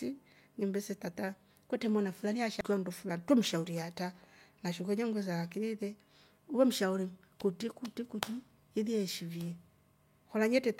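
At 2.61 s there's a quick blip, a bit of damaged data in the compressed stream. Some of the data there was wrong, so the decoder misread that frame, lost sync and hunted for the next frame header, leaving a brief glitch in the speech.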